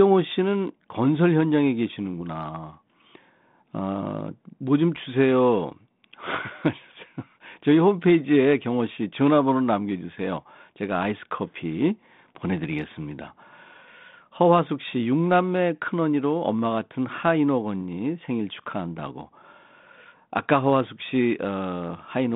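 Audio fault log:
No faults logged; the speech is carried over a 32 kbit/s G.726 ADPCM link with the expected telephone band of roughly 150 Hz to 3.6 kHz.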